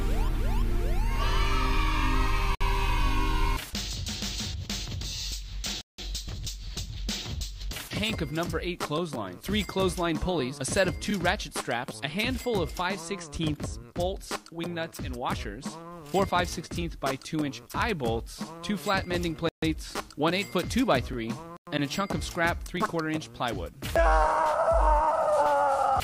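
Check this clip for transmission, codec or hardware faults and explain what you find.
Four brief dropouts to complete silence break the sound at 2.55–2.61 s (57 ms), 5.81–5.99 s (172 ms), 19.49–19.63 s (137 ms) and 21.57–21.67 s (104 ms). Each time the audio stops dead and then picks up again. These are likely Bluetooth stalls: radio interference delays packets on the wireless link, the receiver's buffer empties, and playback halts until retransmitted data arrives.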